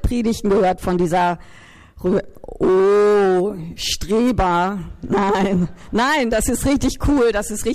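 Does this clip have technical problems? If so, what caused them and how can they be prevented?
No technical faults are audible.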